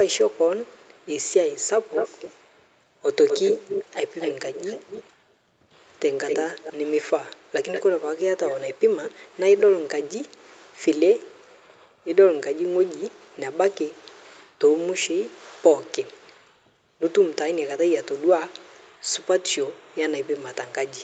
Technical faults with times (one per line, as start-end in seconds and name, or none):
1.94-2.67 echo leak
3.28-3.85 echo leak
4.20-5.04 echo leak
6.26-6.73 echo leak
7.73-7.83 echo leak